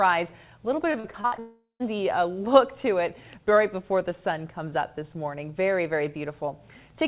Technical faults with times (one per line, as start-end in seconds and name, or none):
0.92-1.39 repeated packet loss (robotic sound)
1.39-1.82 long network dropout